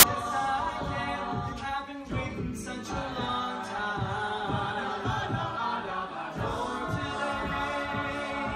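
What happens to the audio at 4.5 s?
Nothing goes wrong at 4.5 s; the audio runs through that moment intact, with no dropout, click or other fault.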